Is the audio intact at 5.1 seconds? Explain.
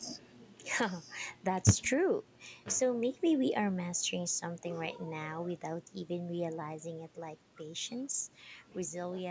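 Yes, at 5.1 seconds the speech plays through without any fault, carrying only the expected character of call microphone processing, with its trimmed low bass and nothing above 8 kHz.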